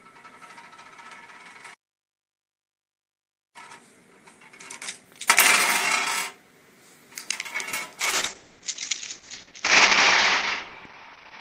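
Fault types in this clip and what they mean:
playback stall: The audio stops abruptly at 1.73 s and stays silent until 3.56 s, a gap of about 1.81 s, before the sound resumes. The likely cause is the player running out of buffered data or its output thread being blocked. On a waveform this appears as a flat line cutting across ongoing material. On a spectrogram it is a clean, empty vertical band with sharp edges on both sides, and no energy at any frequency.
time-compressed catch-up: From 3.56 s to 6.56 s the audio runs at about 1.5 times normal speed while its pitch stays the same. To clear the backlog built up during the silence, the player removes short slices and cross-fades across the joins. This makes events sound hurried. A waveform shows events packed closer together than usual. On a spectrogram, harmonic lines keep their height but run shorter, with small smeared seams where pieces were spliced.
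call bitrate drop: From 8.01 s to the end, the coding quality falls sharply. The change is consistent with the encoder's target dropping from about 32 kbps to about 8 kbps after the call's bandwidth estimate fell. With fewer bits the coding becomes coarse, so the sound turns rough, watery and muffled. On a spectrogram the top cuts off at about 6 kHz, leaving an empty band above. What remains looks blotchy and smeared, while the waveform's overall envelope changes very little.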